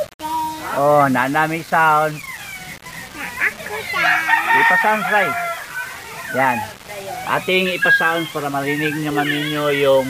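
A grainy, rasping distortion runs through the whole sound, harshest on quiet passages, which turn gritty or sputter. This is likely low bit depth without dither, around 6 bits with rounding. Unlike dithered noise, the error rises and falls with the audio.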